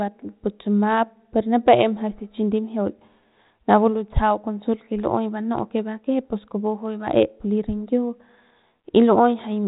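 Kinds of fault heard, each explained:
No faults are heard in this speech clip.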